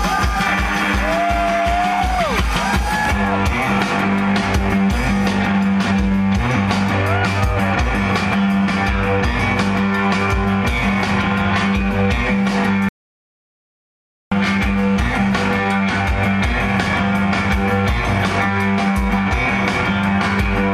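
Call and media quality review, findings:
Audio dropout to silence, 12.89–14.32 s: 1.43 s silence, flat waveform, empty spectrogram column, no room tone; likely input disconnect, encoder kept writing.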